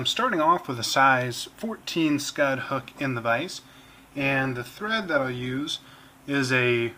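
A short piece of audio drops in quality from 3.71 to 5.71 s, a case of an adaptive stream at a lower bitrate. For those two seconds codec artefacts rise, consistent with a switch from roughly 64 to 24 kbit/s Opus. The change is abrupt in both directions, with no gap.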